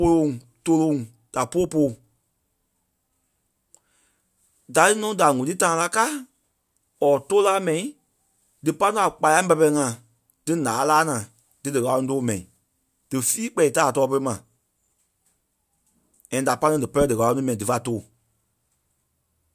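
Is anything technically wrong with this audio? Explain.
No, nothing technically wrong here.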